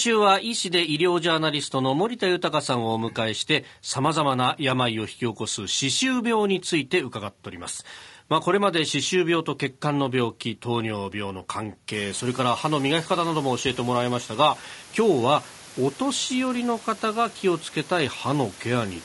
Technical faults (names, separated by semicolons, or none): low-delay AAC compression